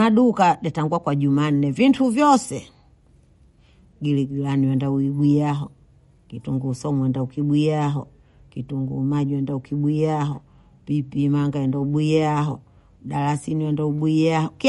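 The speech sounds watery and swirly from start to finish, with nothing above 11.2 kHz. This is likely MP3 compression at a starved bitrate, which fits about 48 kbps: the encoder cuts the treble and drops weak frequency lines that flicker between frames.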